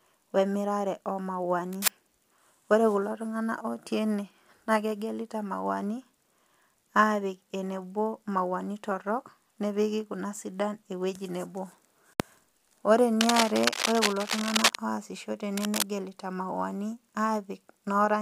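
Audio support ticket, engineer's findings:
Scratchy, rustling noise bursts over the speech at 1.73–1.90 s, 13.21–14.77 s and 15.57–15.83 s, about level with the speech, the last slightly quieter. Cable scratch noise, likely a worn cable or connector moved.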